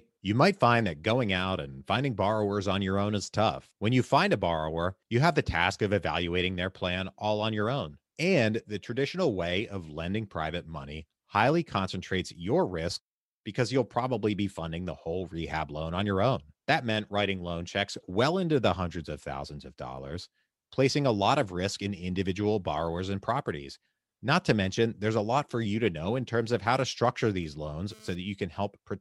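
GSM phone buzz appears from 27.43 to 28.15 s, near the end of the speech. A 2G handset close to the recording chain was sending data in short radio bursts about 217 times a second, and the audio circuitry rectified those pulses into the signal. The result is a hard, raspy buzz at roughly 217 Hz with a dense stack of harmonics, sitting about 26 dB below the speech and having nothing to do with it. It lasts only about 0.7 s, as a data transfer would.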